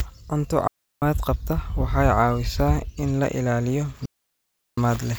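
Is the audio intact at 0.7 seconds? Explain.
No. A digital wireless dropout mutes the speech from 0.67 to 1.02 s: the receiver lost too much data and faded out for about 0.35 s, leaving a clean hole with no noise burst. The waveform flattens to near zero, and the spectrogram shows a blank vertical gap.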